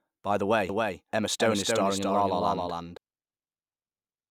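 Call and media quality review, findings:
Doubled audio track, 0.69 to 2.97 s: second full copy of the speech trailing by about 300 ms, roughly 5 dB down, cuts in and out abruptly. Likely a slower duplicate capture path.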